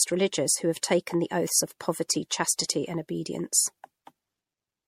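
Throughout, the speech sounds swirly, smeared and hollow, with blurred attacks and nothing above 16.5 kHz. This is likely generation loss from several repeated MP3 passes near 64 kbit/s.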